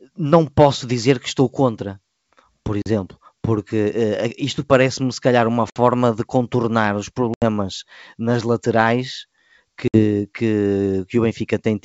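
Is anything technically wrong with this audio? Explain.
Yes. Packet loss on an ADPCM call cuts hard-edged silent holes of 40 to 80 ms at 2.82, 5.70 s (between "se calhar uma" and "de contornar os"), 7.34 s (after "de contornar os") and 9.88 s. Each gap throws the decoder's predictor and step size out of step with the sender's, so the speech comes back slightly distorted before settling. The wideband sound, clear up to about 7 kHz, points to G.722 at 64 kbit/s.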